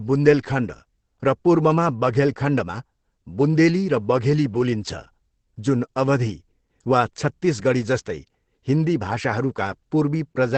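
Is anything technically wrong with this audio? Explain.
Yes. Throughout, the speech sounds muffled and hoarse, with nothing above 8.4 kHz. This is likely heavy Opus compression, with the encoder narrowing the bandwidth and switching to its speech mode at a bitrate around 12 kbps.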